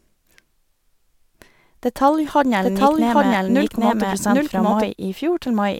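From 2.62 to 4.88 s, a doubled audio track appears. A full-level copy of the speech trails about 0.7 s behind, starting and stopping abruptly. The likely cause is a second, slower capture path.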